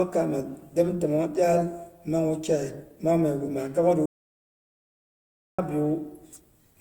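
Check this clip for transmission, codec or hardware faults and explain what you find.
One fault: an audio dropout to silence from 4.06 to 5.59 s. The input was most likely lost, through a disconnected device, a failed link or a mute, while recording continued writing silence. The speech cuts off mid-flow into dead digital silence, with no room tone, for about 1.53 s, then resumes abruptly.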